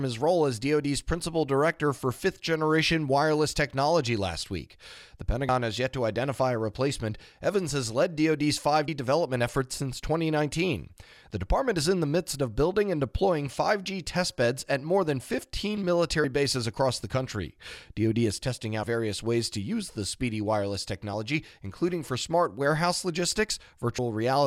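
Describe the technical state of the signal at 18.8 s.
At 18.83 s, between "is testing" and "various ways to use", compressed frames are skipped: about two 32 ms frames, around 70 ms of speech, never play. The audio jumps ahead by the length of the missing frames rather than falling silent.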